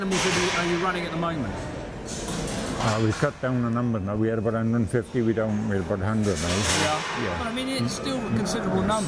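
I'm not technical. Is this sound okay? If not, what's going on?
Yes, no audible faults.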